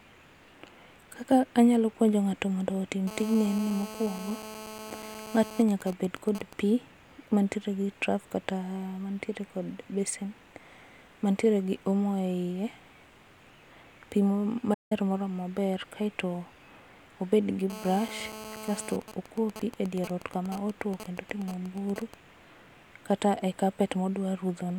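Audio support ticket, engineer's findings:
Hard, raspy 217 Hz buzz with dense harmonics, about 14 dB below the speech, 3.07–5.63 s after "mondo otim" and 17.70–18.97 s after "obed gi". GSM phone buzz: nearby 2G handset mid-call, its radio bursts rectified in the audio circuit.

Even ticks with a longer 217 Hz buzz twice a second, roughly 15 dB down, 5.69–6.53 s and 19.02–22.14 s, each straight after a buzz. GSM signalling bursts: same handset in-call, its user silent.

Sound drops out mid-flow for about 0.17 s, 14.73–14.92 s, then resumes. Playback stall, likely the player starved of data or its thread blocked.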